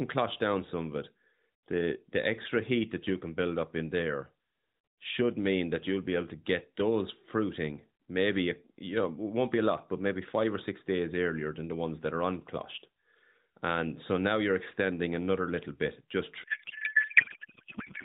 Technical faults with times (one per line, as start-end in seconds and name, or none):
16.44-18.04 codec payload misread